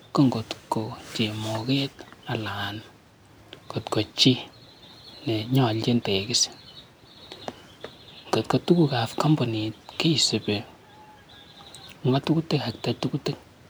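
No technical faults are audible anywhere in the recording.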